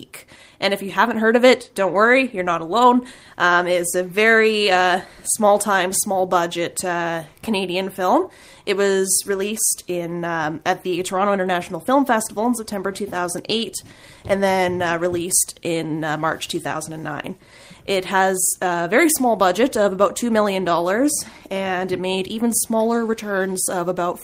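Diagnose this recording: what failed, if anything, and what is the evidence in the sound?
Nothing failed, and the sound offers no evidence of a fault at any stage of the recording.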